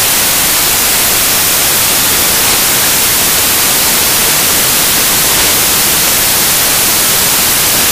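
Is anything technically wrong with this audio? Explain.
Yes. Throughout the clip the audio comes out as loud, harsh broadband noise. These are samples built from the wrong bytes: each value is assembled misaligned or byte-swapped, so rapidly changing low bits become its dominant part.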